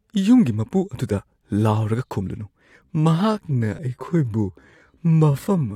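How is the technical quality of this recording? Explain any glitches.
The recording has clear faults: dropped compressed frames at two points and a slowed stretch at the end.

At 2.20 s and 3.78 s, compressed frames are skipped. The sound jumps ahead about 20 ms, then about 40 ms, which fits one and two 21.3 ms frames.

From 2.81 s to the end, the pace drops abruptly to 0.59 times speed while the pitch holds. This likely comes from a time-stretched section. It drags.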